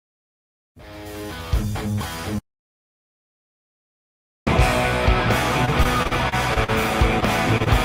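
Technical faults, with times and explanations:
2.39–4.47 s, audio dropout to silence: the sound cuts off abruptly and returns about 2.1 s later, with digital silence and no room tone between. The input was likely lost while recording carried on writing zeros, so everything in that span is gone.
5.65–6.70 s, repeated packet loss (robotic sound): seven separate gaps, the longest 41 ms, leave roughly a fifth of this second patched by extending the preceding sound. The closely spaced repairs chop the flow.
7.20–7.24 s, 7.58–7.62 s and 7.64–7.68 s, short concealed packet loss: about 20 ms of audio missed the decoder each time and was replaced by continuing the previous sound before blending back. Each heals as a brief smear or wobble rather than a gap.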